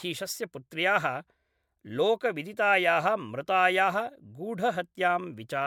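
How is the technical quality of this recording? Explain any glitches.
The technical quality is degraded throughout the speech by generation loss, most likely from repeated MP3 encoding at 128 kbit/s, perhaps about five passes. Each decode and re-encode quantises the audio again on a shifted frame grid, so noise and spectral holes accumulate. The result is swirly, hollow and smeared, with softened consonant attacks, and nothing remains above 19.7 kHz. A single 128 kbit/s encode would sound far cleaner, so the extra swirl and smear point to repeated passes rather than a low bitrate.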